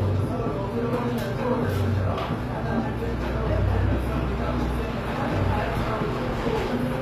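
From start to finish the audio carries HE-AAC compression damage, plainly audible, and likely from a low-bitrate stream, which fits roughly 24 kbps. The treble is bright but synthetic: upper bands are copied from lower ones and reshaped by a coarse envelope, so bright content turns gritty and metallic. A spectrogram shows a hard ceiling at 14.9 kHz, with the upper region repeating the texture of the bands below in blocky patches.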